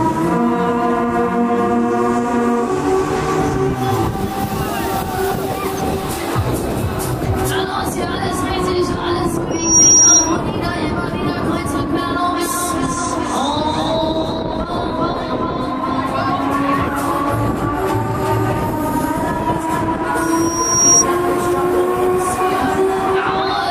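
At 9.51 s a loudspeaker feedback squeal appears: a pure tone near 5.7 kHz that swells over roughly a third of a second and holds until 10.40 s, sitting roughly 10 dB above the surrounding audio. The microphone is hearing its own loudspeaker, and at that frequency the loop gain has passed unity. The same 5.7 kHz squeal returns at 20.22 s, building more slowly over most of a second before stopping at 21.05 s.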